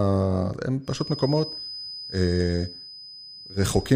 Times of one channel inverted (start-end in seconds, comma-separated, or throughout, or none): none